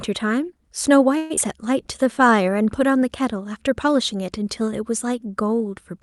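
Speech, carried over a call codec whose top end stops near 12 kHz. From 1.17 to 1.39 s there is a long network dropout, likely a burst of lost packets: the last sound is stretched into a fading buzz for about 0.2 s, then resumes with about 80 ms missing, and playback runs roughly 50 ms later. From 1.86 to 2.84 s a jitter buffer slow-down repeats pitch periods to rebuild its reserve, playing at 94% speed, adding 68 ms and drawing sounds out at unchanged pitch.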